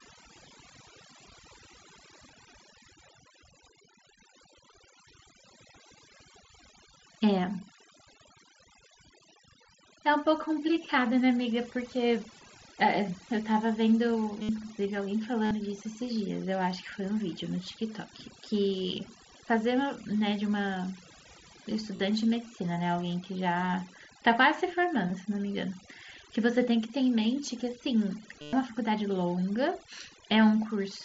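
Overdone noise removal runs through the whole speech clip. The reducer was set too hard. It pushes bands near its noise estimate right down. The background becomes near silence with twinkling specks. Quiet parts of the voice vanish too.

Concealed Bluetooth headset packet loss hits five times: 14.42 to 14.49 s, 15.45 to 15.51 s, 21.96 to 22.00 s, 25.08 s, and 28.41 to 28.53 s. Packets from the mSBC headset link went missing. The receiver repeated recent waveform to fill them. The longest, around 112.5 ms, becomes a held buzzy tone. A small warble follows as the real audio returns.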